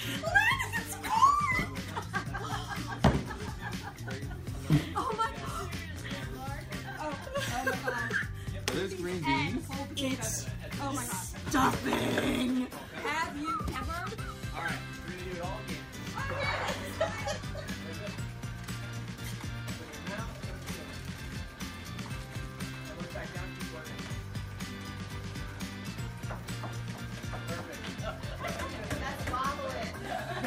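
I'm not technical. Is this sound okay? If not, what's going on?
No. At 3.48, 13.76, 21.36 and 25.88 seconds the sound jumps forward slightly, as if a sliver was snipped out and the ends butted together. The first two gaps are tiny, around 40 milliseconds; the last two are longer, closer to a tenth of a second. The likely cause is a dropped buffer (overrun): the recording software fell behind, so a chunk was overwritten before it could be saved.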